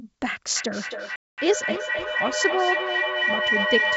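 From 0.56 s a feedback howl builds until the end. The microphone-to-loudspeaker loop gains on each trip, narrowing to a tone near 2 kHz that repeats about every 300 ms and peaks about 1 dB above the speech.

At 1.16 s, packet loss on an ADPCM call cuts a hard-edged 220 ms hole. That suggests around ten packets. Afterward the decoder's predictor is out of step, so the return at 1.40 s sounds unsettled.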